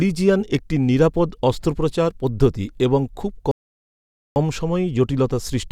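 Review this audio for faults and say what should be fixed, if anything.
A rebuffering stall occurs at 3.51 s: the player exhausted its downloaded audio and had to halt until more data arrived, resuming at 4.36 s. The speech drops to silence right after "অস্ত্রোপচার পদ্ধতি এবং খুব" and then picks up exactly where it stopped, so nothing is skipped, but a gap of about 846 ms is inserted mid-phrase. To prevent this, keep a deeper playback buffer or use adaptive bitrate so delivery stays ahead of playback.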